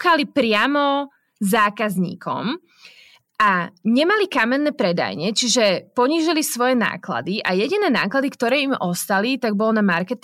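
No technical faults are audible anywhere in the recording; the signal stays continuous and stable from its opening moment to its last.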